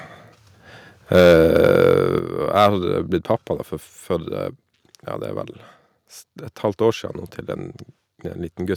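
Microphone overload at 1.14–1.98 s and 2.56–2.68 s clips the tops off the loudest speech peaks, about 6 dB and 5 dB over the limit, likely from excessive input volume, adding a harsh crackle. The microphone volume stepped down at 1.2 s and 2.19 s, dropping voice and background by about 2 dB and then about 6 dB, likely an automatic gain reduction reacting to the clipping.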